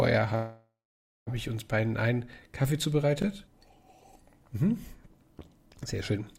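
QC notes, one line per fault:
0.35–1.29 s, call audio freeze: Packets were likely held up and the jitter buffer ran dry, so the receiver extended the last sound as a fading fill, then about 0.51 s of silence. The audio resumes where it stopped, about 0.91 s late, with nothing missing.
3.22 s and 5.96 s, repeated buffer: New audio missed its deadline each time, so the device replayed its last 20 ms buffer once more. The doubled piece meets the fresh audio at a hard join, heard as a brief click or buzz, with no audio lost.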